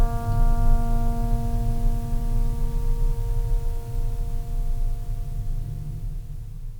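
A short music excerpt with no audible technical fault anywhere in the signal.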